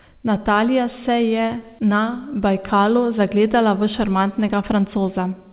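The clip is speech carried over a WebRTC call path, band-limited at 4 kHz as a G.711 A-law line at 64 kbps would be, and nothing in it is technically wrong.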